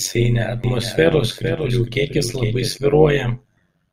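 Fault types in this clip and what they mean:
overlap-add ripple: A metallic buzz throughout, level pumping by about 11 dB roughly a hundred times a second, from overlapping frames rejoined without constant gain.
doubled audio track: A dry copy of the speech trails about half a second behind, about 10 dB quieter, from 0.64 to 2.78 s, likely a second, slower capture path.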